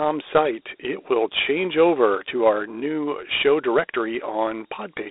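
Speech carrying Dialogic VOX ADPCM throughout: band limited to 300 Hz–3.7 kHz, nothing above 3.8 kHz, with gritty hiss riding each syllable, unlike μ-law's steadier grain, which fits 32 kbps 4-bit coding.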